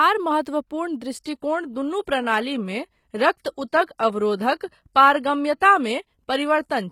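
At 1.14 s the speech switches abruptly to an adaptive stream at a lower bitrate, lasting to the end. Treble thins, nothing above 14.9 kHz, and artefacts rise, which fits a low-rate HE-AAC stream. Unlike a rebuffering stall, no gap occurs.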